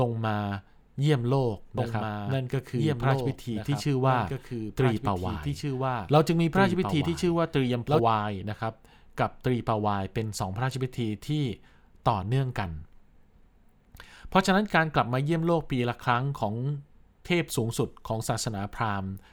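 From 1.78 s to 8.00 s the speech carries a doubled audio track: a second, full-band copy runs about two seconds behind the original, roughly 5 dB quieter. The copy has no decay or room colouring, so it reads as a distinct second layer rather than an echo. It switches in and out abruptly at those boundaries. The likely cause is the signal being captured a second time through a slower path, or an edit leaving two misaligned copies in place.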